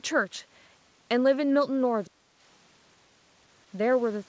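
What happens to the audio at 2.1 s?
The speech drops sharply from 2.05 to 2.28 s, falling by roughly 35 dB at its deepest, so for about a fifth of a second it dips before recovering. This is likely speech suppressed in double talk: with both ends talking at once, the echo canceller couldn't tell the local talker apart from the far end's voice returning through the loudspeaker, so it attenuated both together.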